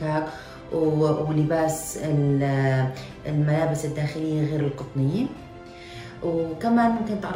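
No technical faults can be heard anywhere in the audio; the signal stays steady and intact throughout.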